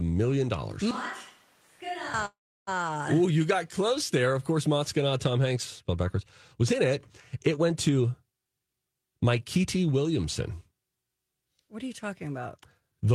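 From 0.91 to 2.14 s the speech suddenly turns roomy and hollow, thinner in the low end and about 10 dB quieter, with background noise rising to roughly 25 dB below the speech. It then snaps back just as abruptly. That's a switch to a distant microphone, most likely the close mic dropping out and the recording falling back on something further away, like a camera mic that hears more room than talker.

Right after, from 2.25 to 2.75 s, there's a call audio freeze. The last bit of sound gets stretched into a fading buzz that thins out into near-silence for about 320 ms. Altogether the receiver fills around 417 ms before the speech picks up again exactly where it left off, so nothing is lost. The likely cause is packets held up in transit, letting the jitter buffer run dry. The catch is that the whole conversation now sits about 0.42 s later than before.

Later, between 8.07 and 8.81 s, the speech runs at about 112% speed with the pitch unchanged, so it sounds a bit rushed. 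That's a jitter buffer speed-up. The receiver, holding more audio than it wants, snips out lots of tiny pitch-period-sized slices in quick succession, trimming roughly a tenth of a second to claw back the extra delay.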